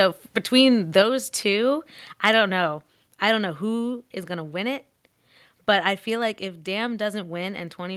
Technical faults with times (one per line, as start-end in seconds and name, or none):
0.56-0.61 microphone overload
1.02 microphone volume stepped down
2.25-2.29 microphone overload
3.06 microphone volume stepped down